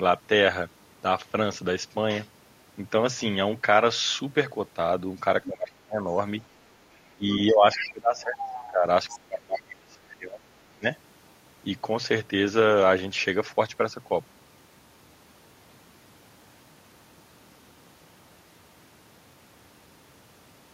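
At 5.44 to 5.5 s a faint scrap of another voice, about 15 dB under the speech, slips in. This is the other side's voice leaking through, likely loudspeaker playback the echo canceller failed to fully remove from the microphone. It returns at 7.74 to 7.91, 8.46 to 8.67, 9.09 to 9.19 and 9.56 to 9.61 s, fading from about 10 dB to about 25 dB below the speech. From 5.47 to 6.1 s the speech dips sharply, by up to about 35 dB. Between 7.15 and 10.86 s it sinks again for around three seconds, by up to about 25 dB. This is speech suppressed in double talk, likely the canceller turning everything down while both sides talked at once.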